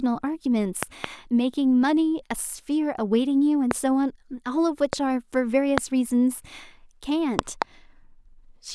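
Loud pops cut through the speech five times. A double pop comes between 0.83 and 1.06 s. Single pops follow at 3.71 to 3.73 s, 4.93 to 4.95 s and 5.78 to 5.80 s. Another double pop lands between 7.39 and 7.64 s. Each is a sharp thump well above the speech level. The likely cause is a sudden voltage pulse entering the signal path. The speech carries on underneath.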